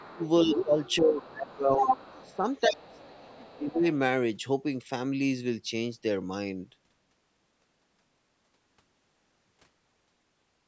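A speech recording in which, from 0.00 to 2.36 s, the other side's voice leaks through at roughly 5 dB below the talker, likely residual echo the canceller failed to remove. It returns faintly, around 30 dB down, between 2.89 and 3.60 s. A spectrogram shows a second, overlapping harmonic pattern under the main one. From 0.07 to 1.90 s and 2.23 to 3.87 s the talker's speech is suppressed in double talk, dipping by as much as roughly 25 dB. The waveform shows sudden envelope gaps, and the spectrogram shows vertical holes. Content ends at 8 kHz throughout, as the call's microphone processing band-limits it.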